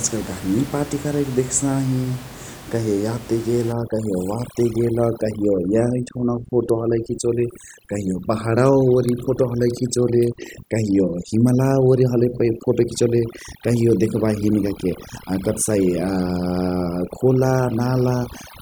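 Overdone noise removal sets in at 3.72 s and runs to the end of the clip. A noise reduction stage pushed too hard is carving out individual frequency bands whenever their level comes close to its noise estimate, and the softer parts of the speech get removed along with the background noise. The room noise, about 17 dB under the speech before that point, collapses into near silence scattered with twinkling specks.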